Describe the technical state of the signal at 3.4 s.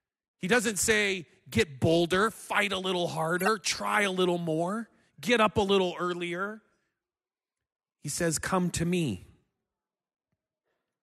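At 3.38 to 3.48 s a corrupt frame was decoded: flipped bits in a handful of compressed frames were played anyway, so misread gains and codes put energy at wrong frequencies. Just after "a little" and before "try a little more", a brief chirp or burst of noise peaks around -15 dBFS.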